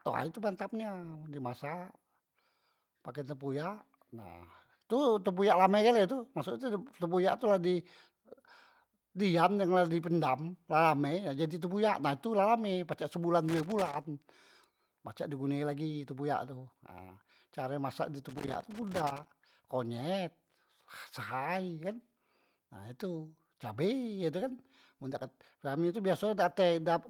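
Loose connector crackle, 13.49 to 14.07 s and 18.29 to 19.29 s: a faulty contact rapidly breaks and remakes the speech path, chopping it into irregular scratchy bursts.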